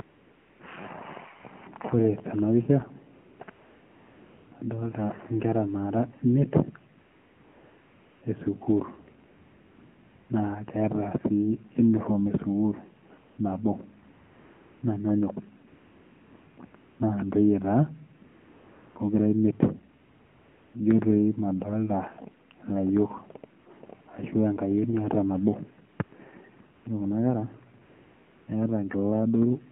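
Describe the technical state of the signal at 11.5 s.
AMR narrowband mobile codec coding is present at 11.5 s, as it is throughout the clip. The speech has passed through a 2G/3G-style coder that models the vocal tract and excites it with a few pulses per short subframe, so only a band of about 150 Hz to 3.4 kHz survives. The plainly audible buzzy, synthetic texture and muffled top fit a low bitrate near 7.4 kbps.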